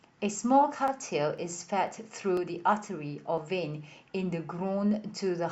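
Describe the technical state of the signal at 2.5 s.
At 2.5 s the speech sits inside a run of periodic USB or driver dropouts lasting from 0.38 s to 3.38 s. Every 0.5 s a background task stalls the audio path, and a sliver of signal, around half a millisecond, is skipped rather than filled with silence, leaving a small splice tick. Its strict half-second spacing, about seven ticks in all, marks it as a scheduled blockage rather than random packet loss or clipping clicks.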